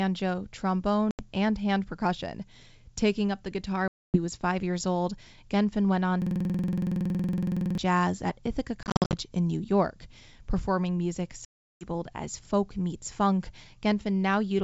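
Speech carried over a G.722 wideband link at 64 kbit/s, with two kinds of fault. Packet loss on an ADPCM call cuts hard-edged silent holes at 1.11 s (80 ms, just before "and hand percussion"), 3.88 s (260 ms), 8.83 to 9.14 s (210 ms lost in scattered gaps of up to 50 ms) and 11.45 s (360 ms, just before "as folk meets funk"). After each hole the speech returns slightly distorted, because the decoder's predictor and step size have drifted from the sender's. That recovery damage separates it from plain dropouts. From 6.22 to 7.78 s, between "went on" and "jazz at", a system hang loop repeats one 46 ms slice exactly, about 34 times, at 21.5 Hz. This fits a 2,048-sample ring buffer cycling while the host was frozen. Its identical repeats set it apart from an ordinary stutter.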